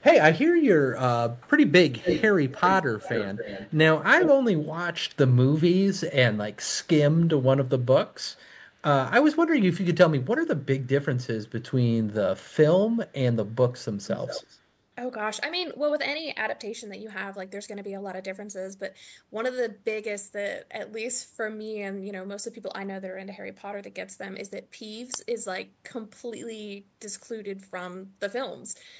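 Echo leak appears seven times: 1.35–1.5, 1.9–2.28, 2.49–2.78, 3.0–3.74, 4.19–4.31, 8.34–8.41 and 14.04–14.58 s. A delayed copy of the speech trails it by 260 ms, by 152 ms at 1.35 s and by 163 ms at 14.04 s. It is barely audible at 1.35 and 8.34 s but nearly as loud as the speech at 1.9 and 4.19 s. A loudspeaker's sound likely slipped past the echo canceller and was sent back.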